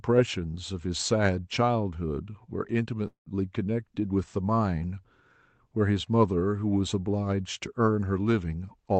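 At 3.07 s the speech hits a call audio freeze that lasts until 3.37 s. The last sound hangs on as a fading buzz, then drops to silence before picking up where it left off, so nothing's lost, just a gap pushed in. The likely cause is packets held up in transit while the jitter buffer ran dry.

Right at the end, from 8.56 s to 9.00 s, there's a jitter buffer speed-up. The speech runs at about 121% with its pitch unchanged, sounding hurried, because the receiver trimmed roughly a tenth of a second of pitch-period slices to shrink a backlog. All of this comes through the Opus call path, with its top end stopping around 8 kHz.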